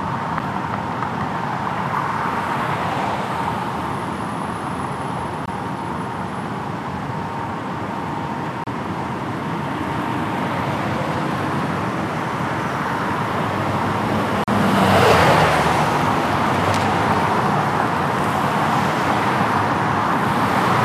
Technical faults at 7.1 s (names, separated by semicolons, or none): none